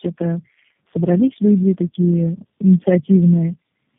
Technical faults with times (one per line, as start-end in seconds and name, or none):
0.00-3.99 block size mismatch (truncated)
0.00-3.99 tandem speech coding